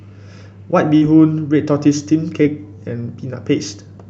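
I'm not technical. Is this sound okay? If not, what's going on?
No. There are two brief glitches from short concealed packet loss. This is speech sent over a call. Small pieces of it arrived too late to be played. The receiver covered each gap by stretching the sound just before it, then blended back into the real audio. The first is at about 0.97 to 1.03 s, where 40 ms went missing. The second is at about 2.43 to 2.47 s, where 20 ms went missing. Each comes across as a quick smear or wobble.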